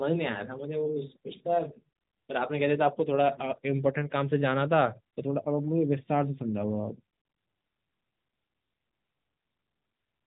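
Nothing in the speech here sounds wrong, and it carries the usual narrowband mobile-codec character, with nothing above about 3.8 kHz.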